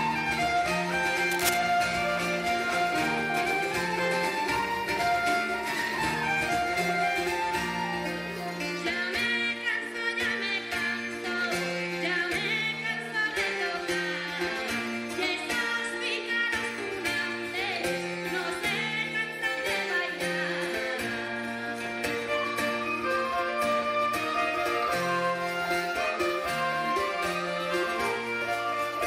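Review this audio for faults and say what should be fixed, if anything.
A worn or loose cable, connector or control was likely moved, making its contact resistance jump erratically. The result is cable scratch noise from 1.31 to 1.59 s, a dense, ragged burst of scratching laid over the sound at nearly its own level. Replacing the suspect lead and securing connectors so nothing shifts during recording would prevent it.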